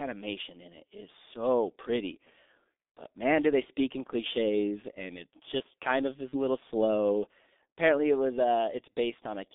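From start to end the speech carries G.723.1 codec damage: a low-rate coder at about 6.3 kbit/s, keeping only about 250 Hz to 3.6 kHz, leaves muffled, hoarse speech with smeared consonants. A spectrogram shows a hard ceiling near 3.6 kHz and coarse, blocky harmonics.

From 6.29 to 6.37 s, VoIP packet loss concealed by the speech codec fills a gap of roughly 30 ms, which fits one lost frame, by extending the last pitch and filter. It sounds like a brief smear that fades. The waveform shows a repetitive, decaying stretch, and the spectrogram shows frozen harmonics.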